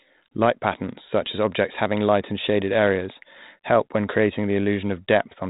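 No technical faults can be heard anywhere in the speech. It carries the narrow telephone band of G.726 ADPCM at 32 kbit/s, with nothing above 3.8 kHz and only a light coding texture.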